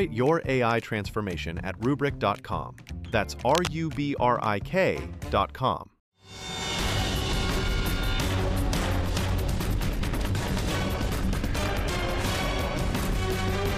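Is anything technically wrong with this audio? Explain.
Yes, there are two faults.

From 3.49 to 3.67 s there is cable scratch noise. A burst of dense, uneven crackle sits over the audio. It is only a little quieter than the main sound. The likely cause is a worn cable, connector or control being moved. Its contact resistance jumps about rapidly, and each jump adds a spike of noise. The result is a short scratching or rustling sound.

From 8.99 to 12.13 s there is a time-stretched section. The audio suddenly runs about 1.63 times faster, but the pitch does not rise. This likely comes from software squeezing the passage to fit a shorter length. To keep the pitch, it drops short pieces of the signal and joins the rest together. The section sounds rushed. The pace changes abruptly at both ends.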